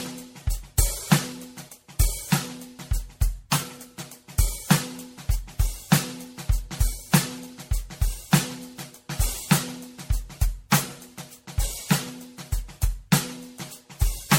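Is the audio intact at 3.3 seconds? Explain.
No. At 3.3 seconds the music carries generation loss, which runs through the whole clip. The likely cause is repeated MP3 coding, around seven passes at a rate consistent with 64 kbit/s. Each decode and re-encode quantises again on a shifted frame grid, so noise and spectral gaps build up. The result sounds swirly, smeared and hollow, with blurred attacks, and nothing remains above 16.5 kHz.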